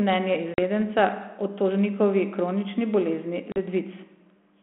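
Packet loss on an ADPCM call strikes at 0.54 s and at 3.52 s, after "tožnikovi kronični bolezni": 40 ms gaps of hard-edged silence. The decoder's adaptive predictor and step size fall out of step with the sender's, so speech resumes slightly distorted.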